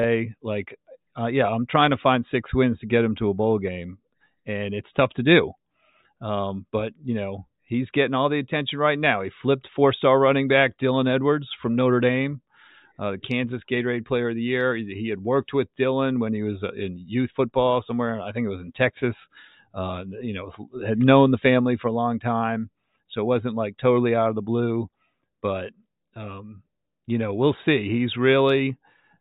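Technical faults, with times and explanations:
No technical faults can be heard anywhere in the speech recording, and the signal stays continuous and steady throughout.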